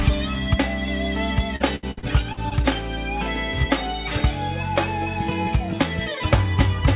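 From 1.56 to 2.53 s, repeated packet loss (robotic sound) hits six times, up to 69 ms each, patched by extending prior audio, so about 28% sounds choppy with pieces missing rather than one clean dropout.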